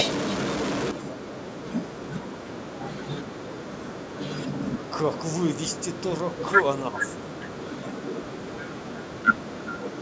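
From 6.8 to 7.04 s the speech abruptly dips by roughly 15 dB, losing level for about a fifth of a second. This is speech suppressed in double talk, likely an echo canceller unable to separate the near talker from overlapping far-end echo and ducking the near talker.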